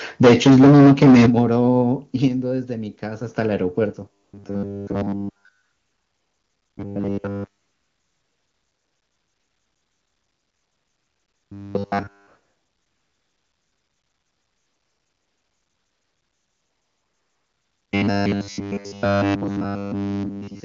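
From 0.23 to 1.41 s, the input gain was likely set too high, causing microphone overload: the peaks run about 13 dB past the converter's ceiling, and a large share of samples, around a third, have their tops sheared off. The loudest syllables take on a harsh, crackling, flattened edge instead of rising cleanly.

The call software likely reacted to that overload by stepping the microphone volume down three times. Each step is an abrupt drop in the level of both speech and background: about 2 dB at 0.25 s, about 8 dB at 1.26 s, and about 5 dB at 2.28 s. The 1.26 s cut is the most obvious, landing near the end of the clipped stretch. The later 5 dB step comes after the distortion has passed.

From 4.13 s to the end, fresh audio was likely arriving too rarely, so the playback side kept repeating the last short buffer while the real signal was skipped. Essentially everything heard from there on is a repeat, producing the robotic sound from repeated short buffers. 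The repetition imposes a fixed 100 Hz buzz, which fits a 10 ms buffer. The speech becomes a rigid, metallic drone that only loosely tracks its original rhythm.

Over that buzzing stretch, the phone judged the talker silent and stopped sending speech frames four times. The receiver filled each gap with AMR comfort noise synthesised from a rough level-and-spectrum estimate: 4.23 to 4.33 s, 5.63 to 6.77 s, 7.61 to 11.51 s, and 12.27 to 17.91 s. In those spans, the real background gives way to a smooth, even hiss that switches on and off at the boundaries, with no audible HD Voice coding roughness beneath it.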